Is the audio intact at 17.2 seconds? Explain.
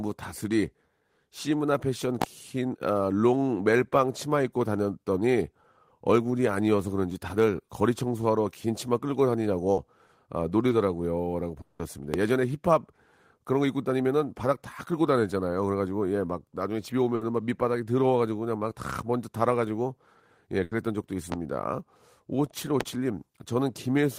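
No, there's a burst of packet loss from about 17.15 to 17.23 s. The receiver stretched the last bit of sound for about 60 ms, fading it down, then picked up again with about 60 ms of the speech simply gone.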